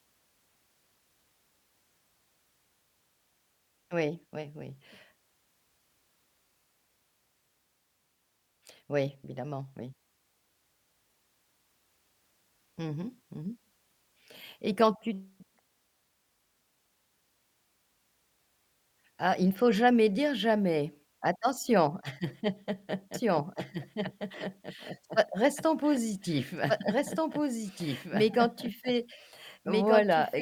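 From 23.14 s to the end, the speech carries a doubled audio track: a second full-band copy trails about one and a half seconds behind, roughly 5 dB quieter, with no decay or room colour. It cuts in abruptly, likely from a slower second capture path.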